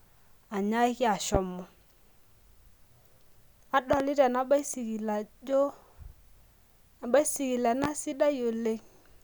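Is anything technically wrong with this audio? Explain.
Yes, the speech carries three loud pops: a single one at 1.35–1.38 s, a double pop at 3.93–4.03 s, and another single one at 7.84–7.87 s. Each rises roughly 15 to 20 dB above the surrounding level while the speech continues underneath. The likely cause is an electrical pulse from a switch, plug, static or driver glitch that the later circuitry shaped into a brief spike. A waveform shows tall narrow spikes, and a spectrogram shows thin full-height vertical lines.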